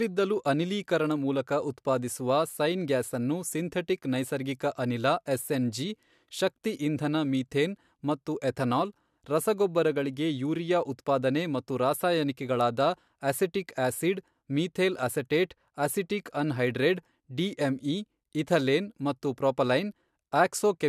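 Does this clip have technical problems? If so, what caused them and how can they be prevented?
No, no technical faults are audible.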